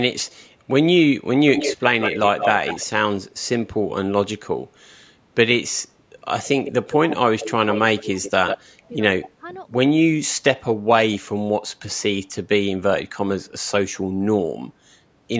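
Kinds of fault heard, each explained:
Echo leak: a delayed copy of the speech returns 150 to 180 ms late, likely loudspeaker pickup the echo canceller failed to remove.
Speech suppressed in double talk: the speech dips by roughly 15 to 25 dB in short pieces, likely the canceller turning down its own talker along with the loudspeaker echo it could not separate.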